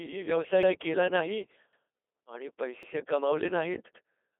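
From start to finish the speech goes through the Codec 2 vocoder, with heavy damage and nothing above 3.8 kHz, which fits a 2.4 kbit/s stream. Only pitch, voicing, energy and envelope survive, and the voice is rebuilt from sine waves, so it sounds robotic and buzzy. Unlike an ordinary low-bitrate codec's warble, the original waveform is gone.

Overlapping chunks cause a stutter at 0.63 s, just before "केला नाही", at 1.73 s, just after "व्यवसाय केला नाही", and at 2.83 s and 3.93 s. Chunks of 1.0 s each start 100 ms before the previous one ends, so that 100 ms plays twice. This is a repeat rather than the silent gap of a dropout.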